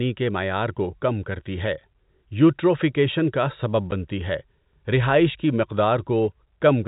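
It's a speech clip over a telephone-band link with the usual 4 kHz ceiling of G.711 coding, and at 3.91 s there's a short hole of packet loss filled with silence. About 10 ms drops out cleanly, which fits one lost packet, and the gap has hard edges.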